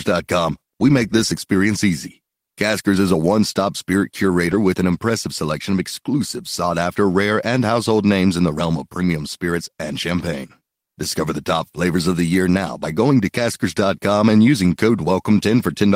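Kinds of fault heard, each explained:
Lost packet rebuilt from error correction: a brief rough, noisier patch at about 4.51 to 4.53 s, with no gap. One lost packet was likely replaced by the lower-bitrate copy carried in the next packet, so about 20 ms plays back coarser.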